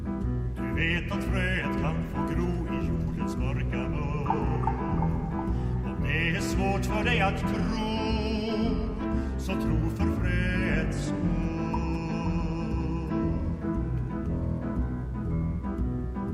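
A steady, raspy mains buzz runs throughout, built on 60 Hz harmonics reaching several kHz. It sits fairly low, around 35 dB under the sound. Switching spikes from a dimmer, rectifier or missing shield cause it.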